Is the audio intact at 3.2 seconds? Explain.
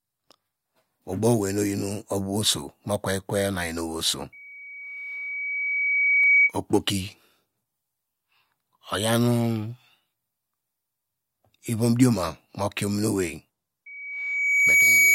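Yes, at 3.2 seconds the speech plays through intact with no dropout, click or other fault.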